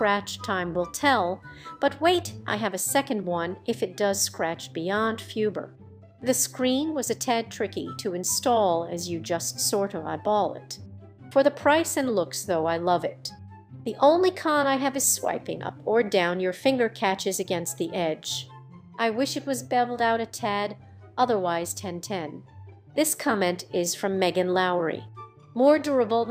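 Nothing stood out as a technical problem on listening to the clip.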